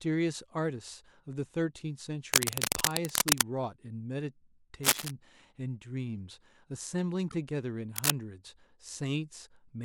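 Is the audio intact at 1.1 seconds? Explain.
Yes, at 1.1 seconds the speech is intact, with no technical fault to be heard at that moment.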